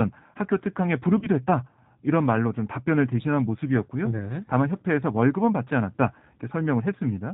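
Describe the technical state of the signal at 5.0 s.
G.729 codec damage runs throughout, including at 5.0 s. The speech is rebuilt from a vocal tract model and sparse pulses, which fits 8 kbit/s, so it is capped at 4 kHz and sounds audibly rough and synthetic.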